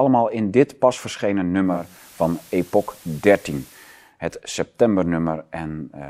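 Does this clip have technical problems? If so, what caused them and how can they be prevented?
Yes: from 1.61 to 4.14 s hiss rises well below the speech and level shifts about 2 dB, as digital radio blending to analogue FM cross-faded over 0.47 s. Prevent it with stronger digital reception or a better antenna.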